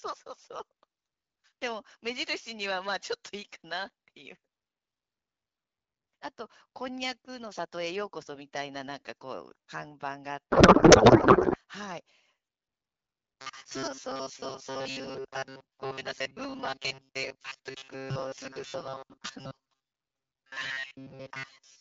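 Codec payload misread, 10.50 to 11.57 s: octet-aligned AMR frames are decoded as bandwidth-efficient, shifting every field, so speech becomes garbled noise and warble barely tracking it. Robotic sound from repeated short buffers, 13.41 s to the end: a rigid metallic buzz at 134 Hz follows the speech roughly, likely from a roughly 7.5 ms chunk replayed while most real audio is skipped.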